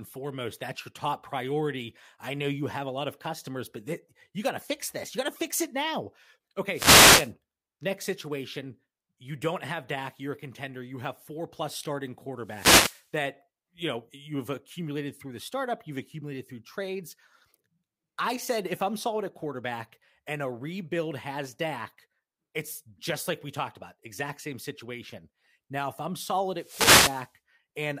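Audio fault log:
6.72–7.32 s, 12.44–13.07 s, 26.56–27.32 s: wireless microphone noise hit, a short static swish over the speech as the FM signal fades and receiver noise rises, after "to fix it now", "have four plus starting" and "if I'm solid".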